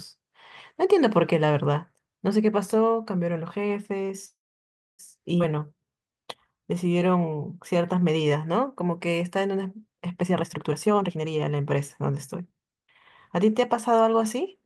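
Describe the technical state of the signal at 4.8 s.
At 4.8 s the call is in a call audio freeze running from 4.25 to 5.01 s, most likely because packets stalled in transit and the jitter buffer drained empty. The receiver stretches the last sound into a brief fading tail, then about 650 ms of silence, filling roughly 0.73 s in all. When delivery resumes, the sound picks up exactly where it stopped, so nothing is lost, but everything afterwards arrives about 0.73 s later.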